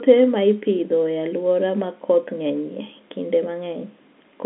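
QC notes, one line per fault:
Nothing to flag here: the speech comes over an ordinary G.711 telephone line with the top end stopping around 3.8 kHz, just as that path should, and no faults turn up anywhere in it.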